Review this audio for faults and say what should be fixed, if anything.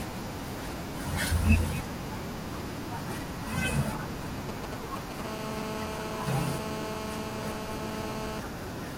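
GSM signalling bursts, 4.49 to 5.21 s: a nearby 2G phone's brief radio bursts, rectified by the audio circuit, make galloping ticks and short 217 Hz buzzes only a little below the speech.

GSM phone buzz, 5.25 to 8.40 s: the phone's call transmission pulses 217 times a second, which gets rectified into a steady, raspy 217 Hz buzz about 5 dB below the speech.

To prevent both, keep mobile phones well away from microphones, cables and preamps, and use shielded, properly grounded balanced wiring with RF filtering at the inputs.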